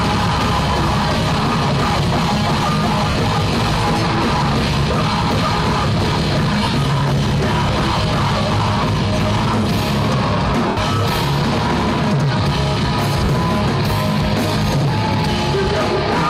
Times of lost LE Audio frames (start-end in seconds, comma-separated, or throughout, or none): 3.10-3.15, 6.64-6.74, 10.68-10.77, 13.24-13.29